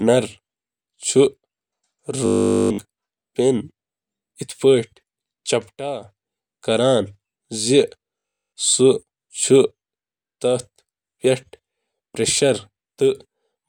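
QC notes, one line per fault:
2.26–2.78 s and 8.19–8.55 s: robotic sound from repeated short buffers. The speech turns into a rigid, metallic buzz at 50 Hz that only loosely tracks the words. The likely cause is a 20 ms stretch being looped over and over while nearly all the new audio is skipped.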